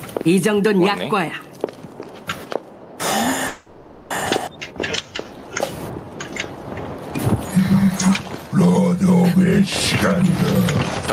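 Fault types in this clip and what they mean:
Gain pumping: Throughout, the gain swings by around 20 dB, ducking under each loud sound, likely from excessive gain driving a fast limiter that squashes dynamics.
Call audio freeze: From 3.47 to 4.12 s, the last sound is extended as a fading buzz or hiss for 630 ms, then resumes where it stopped, likely because the jitter buffer ran empty while packets were delayed.
Skip ahead: At 4.46 to 4.49 s, playback jumps forward by roughly a third of a second. The dropped stretch leaves the two sides joined almost directly with a very brief fill.
Jitter buffer slow-down: From 4.68 to 5.46 s (88% speed) and 7.57 to 9.16 s (92% speed), repeated pitch periods or bits of pauses stretch the sound at unchanged pitch, rebuilding buffer reserve.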